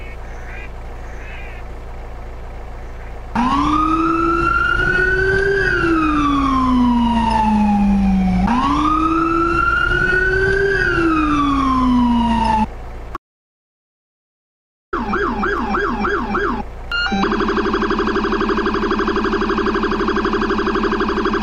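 From 13.17 to 14.93 s, an audio dropout to silence cuts in abruptly, leaving dead silence with no room tone. The cause is likely a lost input.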